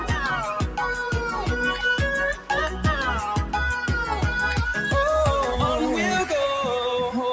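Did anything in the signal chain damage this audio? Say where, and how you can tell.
Yes. At the call-processing stage, a noise suppressor applied to music or sounds stayed active for the whole clip. Built for speech, it treats sustained tones and decaying tails as noise and turns them down, so the level swings by about 5 dB. Onsets get through while held material sinks, giving a pumping, fluttery quality. A waveform shows the envelope sagging after each attack. A spectrogram shows sustained partials and reverb tails fading patchily, within a band that stops at 8 kHz.

One stronger event stands out as sound cut by the noise suppressor, from 2.34 to 2.5 s. Here the suppressor judged the material to be noise and pulled it down harder than its surroundings, with the deepest drop about 8 dB, lasting roughly 150 ms. It is heard as a brief hollow dip or swallowed decay. The waveform shows a short trough in amplitude, and the spectrogram shows a narrow vertical band of reduced energy.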